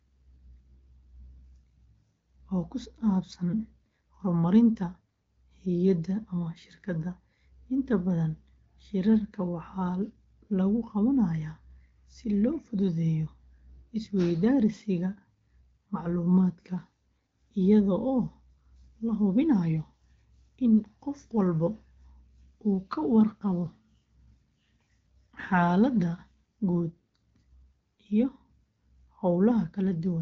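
No technical faults are audible.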